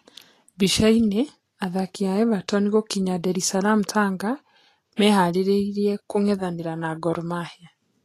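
The speech in this clip has been through lossy encoding at a low setting, likely Vorbis compression at a bitrate somewhere around 35 kbps judging by the damage. The encoder keeps only a coarse outline of the spectrum and spends few bits on the upper bands, so nothing survives above about 14.1 kHz, and the treble that remains is rebuilt as grainy hiss rather than real detail. Throughout, tones sound roughened and consonant onsets lose their sharpness.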